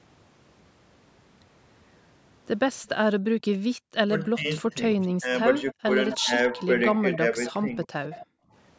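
From 3.76 to 3.95 s the room sound drops away by about 40 dB, then returns: background gated by the echo canceller, which clamped the microphone while the loudspeaker played. The speech then dips in level from 4.26 to 4.69 s, sinks deeply from 5.13 to 5.31 s, pulls down again from 5.72 to 6.53 s, and thins slightly from 6.94 to 8.27 s. This is speech suppressed in double talk, where the canceller likely mistook overlapping talk for echo and turned it down. Along the way, at 5.01 to 5.07 s and 7.12 to 7.17 s, a brief, faint copy of the speech trails 259 ms behind, much quieter the first time and more noticeable the second. That is an echo leak, likely loudspeaker sound the far end's canceller failed to remove.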